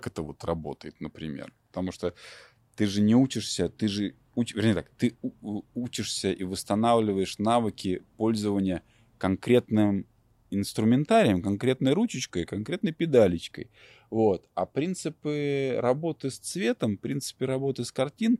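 No technical faults occur at any point in this speech recording, so there is nothing to place in time order.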